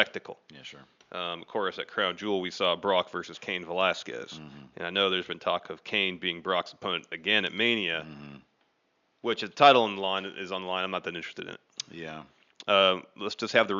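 Nothing in this speech recording points to a technical fault, and the faint room noise sitting about 50 dB below the speech is simply part of the space where it was recorded.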